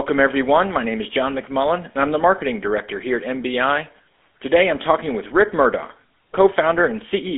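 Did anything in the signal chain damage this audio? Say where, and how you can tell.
Yes, at the codec stage: this speech has gone through the GSM full-rate codec, and the damage runs the whole way through. You can hear the typical buzzy, gravelly texture in the voice, and the spectrum is cut off at around 3.8 kHz on a narrow 250 Hz to 3.5 kHz line band, which fits a 13 kbps full-rate path. The codec rebuilds the voice from a vocal-tract model driven by sparse regular pulses, and that thinned excitation is what produces the roughness.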